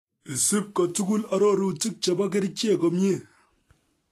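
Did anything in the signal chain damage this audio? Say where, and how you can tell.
Yes. Vorbis compression damage runs through the whole speech clip and is plainly audible, most likely introduced at the codec stage. Nothing reaches above 14.2 kHz, and the upper band sounds hissy and grainy: the encoder has rebuilt the treble as coarse noise over a smooth spectral envelope instead of keeping the fine detail. Tones come out roughened and consonant attacks smeared, which fits a low bitrate of around 34 kbps.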